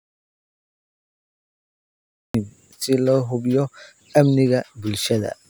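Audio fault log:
0.00–2.34 s, audio dropout to silence: speech is absent from the start, dead digital silence with no room tone, likely from lost input while recording continued.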